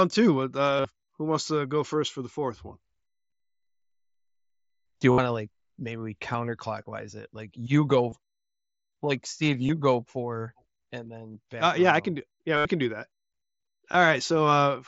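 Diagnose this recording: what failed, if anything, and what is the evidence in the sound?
Concealed Bluetooth headset packet loss on the headset link: brief buzzy, level-held patches at 0.77, 5.12, 8.1, 9.67 (before "go for and"), 11.32, 12.57 (before "can do that") and 13.92 s, 15 to 82.5 ms long, plus a single 7.5 ms lost frame at 6.33 s (after "to like maybe we") that is nearly hidden. The phone patched each gap by looping the best-matching recent waveform.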